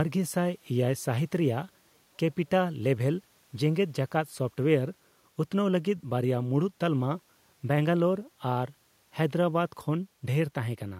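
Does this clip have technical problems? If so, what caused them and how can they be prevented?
No, this clip has no technical problems, so there is nothing to trace or prevent.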